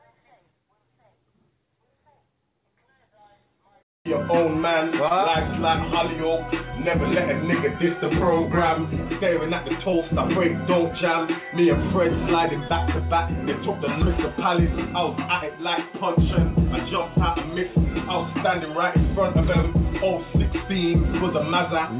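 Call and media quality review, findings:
Short concealed packet loss at 5.08–5.12 s, 9.90–9.94 s and 12.68–12.72 s. Brief smear or wobble each time. About 20 ms missing per event, bridged by extending the preceding sound, then crossfaded back. Probable component: jitter buffer concealment on the call path, narrowband with nothing above 4 kHz, consistent with G.711.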